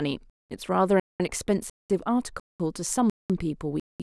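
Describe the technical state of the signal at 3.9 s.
At 3.9 s the speech sits inside a gap between chunks. It runs from 3.80 to 4.00 s, a 200 ms silence. The audio is split into 0.5 s chunks, and silence is inserted at this join. It is heard as a short hole in the speech.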